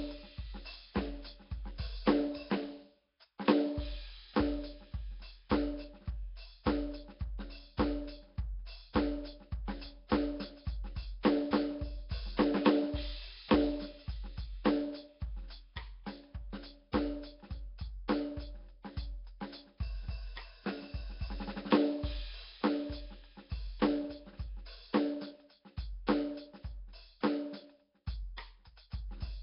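From start to finish the music sounds rough and smeared, with a hissy, grainy halo around every sound and a murky, underwater quality. Nothing reaches above 5.3 kHz, and the damage is heavy. The likely cause is Nellymoser compression, the old Flash codec, running at a rate that fits around 22 kbps. It spreads too few bits across each short block, so quieter bands are dropped and filled with noise.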